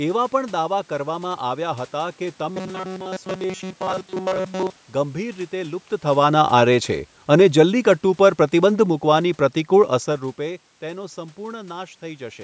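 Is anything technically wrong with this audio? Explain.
Yes, there are two faults.

From 2.49 to 4.76 s, right after "કરવામાં આવ્યા હતા કે", the speech turns into a rigid metallic buzz. This is robotic sound from repeated short buffers, likely caused by audio arriving too late so that a fragment about 5 ms long is looped in place of the missing material, for most of that stretch. The loop imposes a fixed 188 Hz pitch. A spectrogram shows evenly spaced horizontal harmonics at multiples of 188 Hz, and the waveform shows identical repeating blocks.

From 6.06 to 10.03 s, leading into "રૂપે તેનો", the level sinks steadily by about 5 dB. This is automatic gain falling: the gain control judged the input too loud or its background noise too strong and reduced its gain gradually, so the room noise sinks along with the speech. That shared drop separates it from the talker's own movements near 6 s and 10 s. 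On a waveform the envelope tapers smoothly, and on a spectrogram the background floor darkens along with the speech.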